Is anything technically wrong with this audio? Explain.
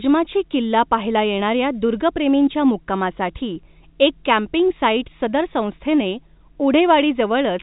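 No, nothing technically wrong stood out on listening to this speech, which carries the narrow telephone-band character of G.711 telephone coding as a normal part of its path.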